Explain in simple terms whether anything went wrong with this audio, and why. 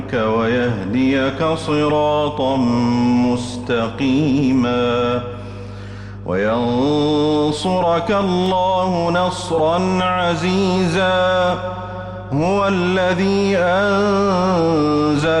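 Two things stand out. First, there's mains hum running the whole way through: a steady low 50 Hz drone, fairly loud against the rest of the sound. It's the power supply leaking into the signal, probably through a ground loop or a transformer sitting too close.

Second, at 8.46 s there's a single sharp click. That's most likely dropped samples, where a tiny sliver of the stream, well under a millisecond, goes missing, so the waveform suddenly jumps instead of flowing smoothly.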